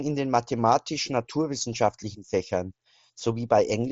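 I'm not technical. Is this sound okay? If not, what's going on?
No. Sample clock jitter runs through the whole clip: the recorder's timing wobbles by around a millionth of a second, so each sample is taken a little early or late. That adds a faint hiss that gets louder on loud, bright parts of the speech and disappears in the pauses. The Bluetooth headset link also cuts everything above about 7.7 kHz.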